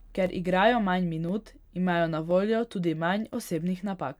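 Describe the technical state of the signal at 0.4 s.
At 0.4 s the signal sits inside a run of periodic USB or driver dropouts spanning 0.26 to 3.33 s. Roughly once a second, something blocks the USB bus or audio driver and a couple of milliseconds of audio are replaced by silence, producing brief, evenly spaced ticks in the speech.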